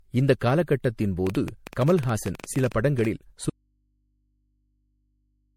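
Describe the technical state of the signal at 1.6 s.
At 1.6 s a train of clicks is under way, running from 1.27 to 3.06 s. About 13.5 similar pulses per second at uneven spacing, roughly thirty in all, peak about 10 dB above the speech. The matching shapes set it apart from random crackle, and it likely comes from interference or a faulty connection. Underneath, generation loss runs through the whole clip. At 1.6 s the speech sounds swirly and hollow, with blurred attacks and nothing above 16.7 kHz, which is worse than a single 64 kbit/s MP3 pass would give. That points to likely repeated re-encoding, around five times.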